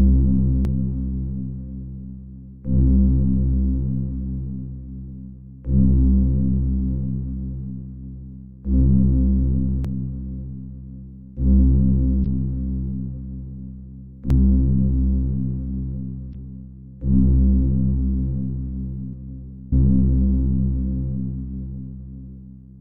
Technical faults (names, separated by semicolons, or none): dropped buffer (overrun); damaged data in a compressed stream